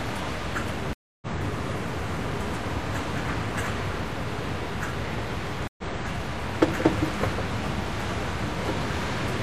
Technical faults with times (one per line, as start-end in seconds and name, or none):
0.93-1.27 stream reconnect
5.67-5.83 stream reconnect